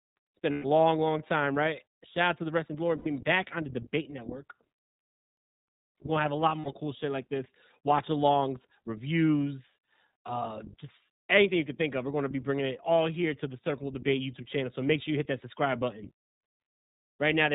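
The whole clip of speech has been through the iLBC codec, and the damage is plainly audible: nothing survives above 4 kHz, so the sound is dull and boxed-in, with a slightly rough, synthetic edge. That narrowband texture, and the way each short slice is coded independently, fits iLBC's 20 ms frame mode at around 15.2 kbps.

On top of that there are three bursts of lost iLBC frames. At 0.52 to 0.66 s, about 120 ms goes missing, which fits six 20 ms frames. Another 80 ms drops out at 2.98 to 3.08 s, and a shorter 60 ms gap comes at 6.61 to 6.67 s. In each one the decoder fills the hole by looping the last pitch cycle with some noise mixed in, so you hear a brief held, buzzy vowel where the speech should be. Since iLBC frames don't depend on each other, the speech snaps back cleanly right after each gap.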